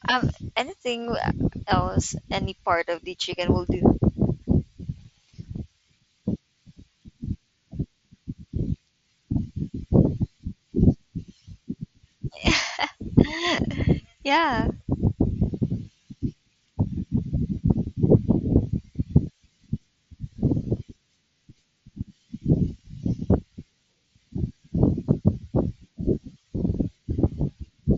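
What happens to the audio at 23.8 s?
Nothing goes wrong at 23.8 s: the speech carries on intact through the Bluetooth mSBC headset path, with no dropout, glitch or other fault at that moment.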